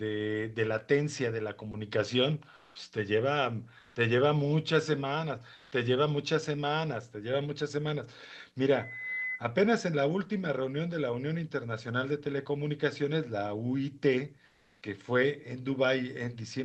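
At 1.71 s a brief 20 ms slice of speech gives way to steady noise or near silence, likely sound dropped by the voice detector, which mistook it for background.

At 2.55–2.75 s, 3.79–3.95 s, 5.55–5.71 s and 14.45–14.81 s, comfort noise in place of the background replaces the real room sound during pauses, likely from discontinuous transmission in the Opus call path. The background here sits about 34 to 45 dB below the loudest speech. These patches are smooth and featureless. Most match the surrounding level within about 2 dB, but the one at 5.55 s is about 7 dB louder. None of them cut into speech.

From 8.71 to 9.43 s a loudspeaker feedback squeal appears as a single 2 kHz tone that swells over roughly 0.4 s to a few dB below the speech. Its self-building pure pitch sets it apart from steady interference hum or whistle.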